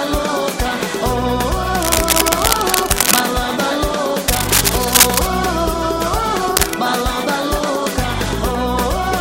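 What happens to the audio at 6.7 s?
Cable scratch noise runs from 6.56 to 6.78 s: a dense, uneven rustle roughly as loud as the sound itself. A worn cable or connector being moved is the likely cause. Unlike a single click or dropout, the sound continues underneath the scratching.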